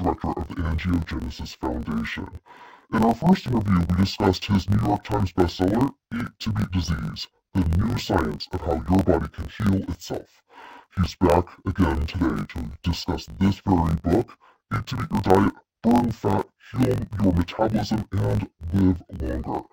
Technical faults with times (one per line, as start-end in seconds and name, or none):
0.00-19.73 interleaved audio read as planar